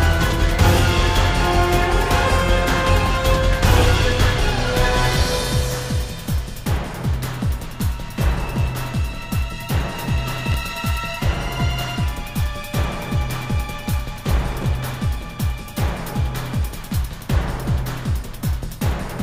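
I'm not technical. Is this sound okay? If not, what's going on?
No. At 10.52–10.54 s and 14.62–14.64 s, chunks out of order: two tiny slices of sound swap places, causing a brief jumbled moment. Unlike a dropout, nothing is missing.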